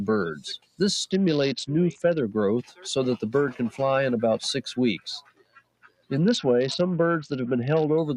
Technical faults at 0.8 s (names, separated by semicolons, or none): noise suppressor applied to music or sounds; sound cut by the noise suppressor